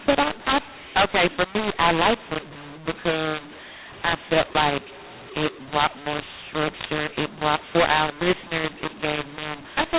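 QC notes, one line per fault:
Throughout: mu-law and A-law mixed up. A-law coded telephone speech decoded as mu-law, so levels scramble, speech turns harsh and distorted, and pauses fill with noise.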